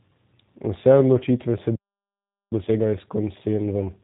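Throughout, the speech carries G.729 codec damage: a rough, slightly synthetic texture and no content above 4 kHz. This is consistent with an 8 kbit/s speech codec rebuilding the signal from a vocal tract filter, pitch prediction and a few pulses per frame.

At 1.76 s, just after "odločitve se", a playback stall cuts the sound off mid-flow. It stays silent until 2.52 s, a gap of about 0.76 s, most likely because the player ran out of buffered data or its output thread was blocked.

From 2.52 s to the end, time-compressed catch-up follows. The player works off its backlog by removing short segments and cross-fading the joins, so the speech runs about 1.25 times faster at normal pitch.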